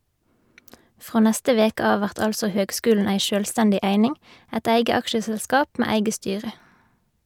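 No technical faults can be heard anywhere in this speech recording.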